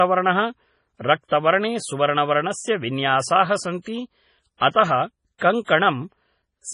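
MP3 compression runs from start to finish, and it is heavy. Nothing survives above 10.5 kHz, so the speech sounds dull, with the air gone from the top. The likely cause is an MP3 encoder starved of bits, at a rate that fits about 24 kbps. To save data it cut the treble at a fixed frequency and dropped weak spectral detail, which flickers in and out between frames and gives the speech a watery, swirling texture.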